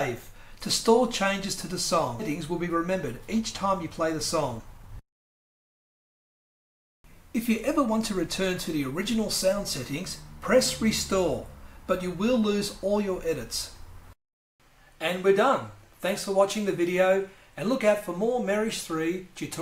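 The audio has two timing faults close together. At 2.19 to 2.21 s there is a skip ahead. Playback jumps forward with no gap filled in. Roughly a second of audio is missing. The sides of the jump are joined almost directly. A stretch was lost on the way, or the jitter buffer dropped it when it overflowed while later audio was already waiting.

From 2.39 s to 9.15 s comes a jitter buffer speed-up. The audio plays at about 108% speed with its pitch unchanged, and it sounds hurried. The buffer held more audio than its target, as happens after delayed packets arrive together. To cut that delay, the receiver removed short pieces of one or a few pitch periods many times in a row. Altogether about half a second was trimmed across that stretch.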